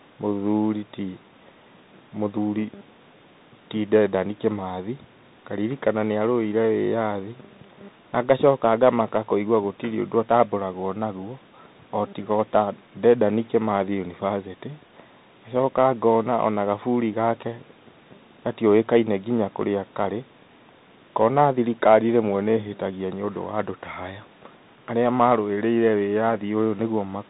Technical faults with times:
0.00-27.30 Bluetooth CVSD headset codec

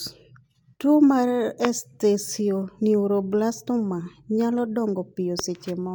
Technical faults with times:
1.65-1.67 loud pop
5.39-5.41 loud pop

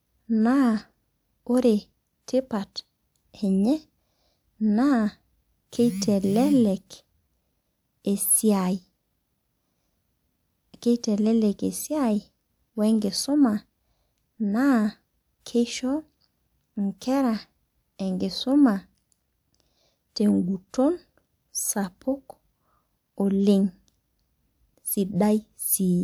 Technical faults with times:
none

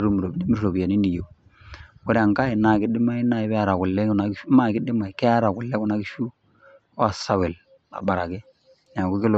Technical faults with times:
none

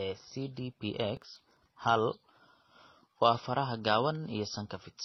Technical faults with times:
0.00-5.05 transcoding between lossy codecs
1.17-1.57 processor overload crackle

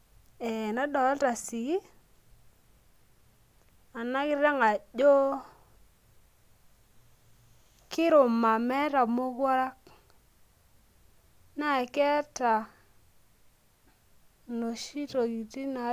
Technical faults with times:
none

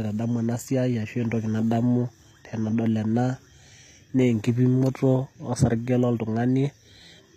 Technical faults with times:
0.00-7.36 HE-AAC compression

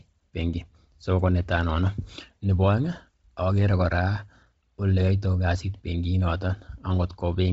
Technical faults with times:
0.00-7.53 Bluetooth LC3 compression

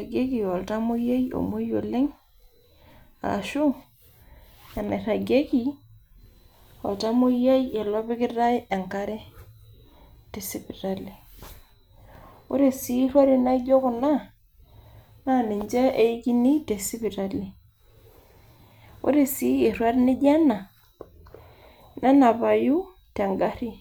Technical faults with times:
none

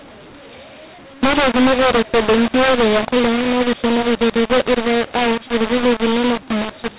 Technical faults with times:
0.00-6.98 mu-law and A-law mixed up

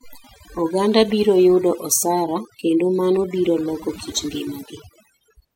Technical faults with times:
0.00-5.56 overdone noise removal

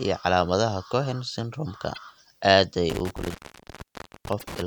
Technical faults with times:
1.92-1.98 broken MP3 bit reservoir
2.90-4.62 intermittent contact
4.38-4.43 broken MP3 bit reservoir

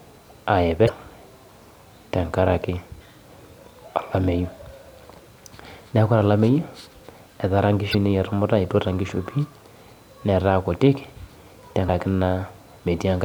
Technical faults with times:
0.85-0.90 damaged data in a compressed stream
2.97-3.01 damaged data in a compressed stream
7.90-7.95 damaged data in a compressed stream
11.88 damaged data in a compressed stream

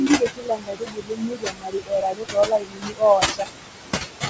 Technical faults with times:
0.00-4.30 noise suppressor artifacts
0.00-3.47 speech cut by the noise suppressor

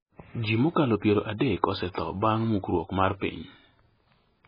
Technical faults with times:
0.00-4.47 MP3 compression

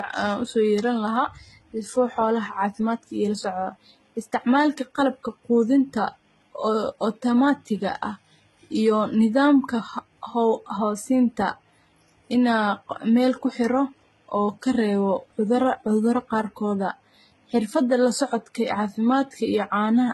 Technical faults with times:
0.00-20.14 transcoding between lossy codecs

